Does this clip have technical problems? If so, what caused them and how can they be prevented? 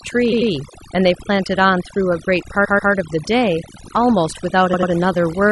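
Yes. Overdone noise removal runs through the whole speech clip: the noise reduction was set so aggressively that it pulled down any frequency band sitting near its noise estimate, taking quiet parts of speech too. The background becomes near-silent with twinkling specks. Keeping the reduction strength moderate and checking the result by ear prevents this.

Repeated frames occur at 0.31 to 0.50 s, 2.64 to 2.91 s and 4.73 to 4.91 s. Blocks of compressed audio were written or sent more than once, so the decoder replayed them. Each block plays two extra times: about 93 ms blocks at the first and third spots and a 139 ms block at the second. The result is an audible stutter that lengthens the audio. Verifying frame sequence numbers and discarding duplicates in the writing or streaming path prevents this.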